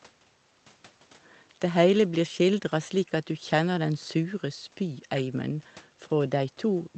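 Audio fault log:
Nothing stood out on listening to this speech recording.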